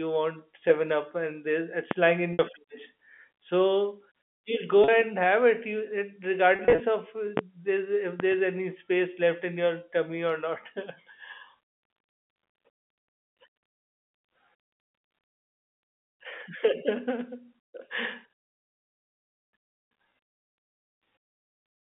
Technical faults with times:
1.91-1.95 loud pop
2.33-2.39 packet loss with pitch repetition
4.84-4.88 packet loss with pitch repetition
6.56-6.80 packet loss with pitch repetition
7.37-7.41 loud pop
8.20-8.36 loud pop
11.70-11.81 packet loss with pitch repetition

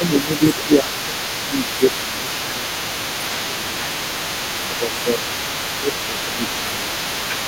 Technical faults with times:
0.00-1.18 speech suppressed in double talk
0.00-7.47 other side's voice leaking through
1.49-3.97 speech suppressed in double talk
4.65-5.21 speech suppressed in double talk
5.80-6.92 speech suppressed in double talk

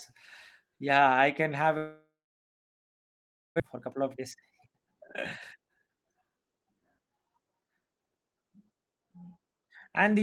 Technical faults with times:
1.77-3.62 long network dropout
3.67-5.02 jitter buffer speed-up
5.56-6.74 jitter buffer speed-up

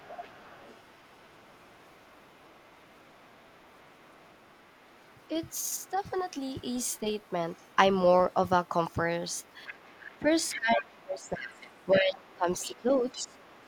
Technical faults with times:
0.00-7.76 other side's voice leaking through
5.78-5.98 speech suppressed in double talk
8.32-13.68 other side's voice leaking through
10.19-13.36 speech suppressed in double talk

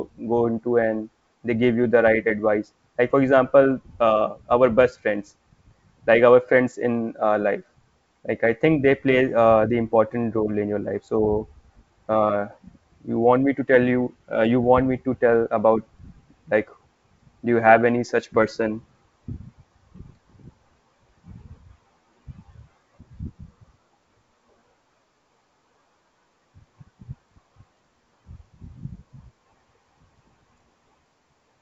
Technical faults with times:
none

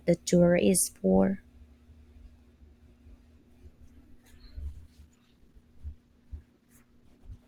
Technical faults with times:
2.39 overlapping chunks
4.71-7.47 adaptive stream at a lower bitrate
4.90 overlapping chunks

